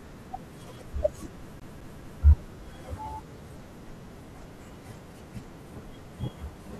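CD stuck on one turn, 1.60 to 2.23 s: a disc flaw keeps throwing the laser back, so a 0.21 s slice of speech repeats three times, each with a brief mute.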